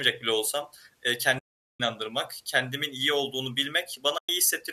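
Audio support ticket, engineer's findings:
Speech dropouts at 1.39–1.80 s (410 ms) and 4.18–4.29 s (110 ms). Soft fade out and back in. Points to AAC frame loss with muting: the decoder zeroed the missing spectra, and the overlapping windows smoothed the edges. Gap lengths fit runs of about 41 and 11 short 10 ms frames. Unlike packet-loss concealment, there is silence, not repeated or smeared sound. The low-delay AAC path, likely AAC-ELD, shows only light coding damage.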